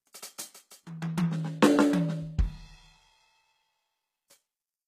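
All the way through, the music carries plainly audible damage from likely HE-AAC compression: the treble is rebuilt, so the top end sounds gritty and metallic, with nothing above 14.9 kHz.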